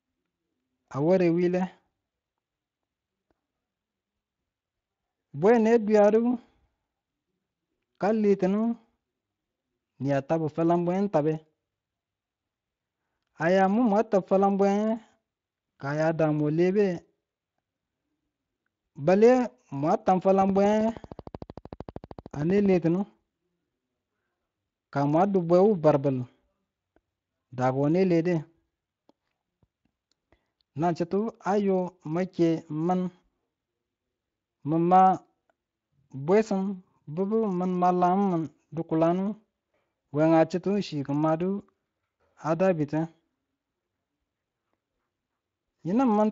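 From 20.42 to 22.75 s there's a train of clicks: around thirty evenly spaced pops at 12.9 per second, peaking a bit above the speech, likely interference or a faulty connection. The light Speex coding underneath is faintly audible throughout.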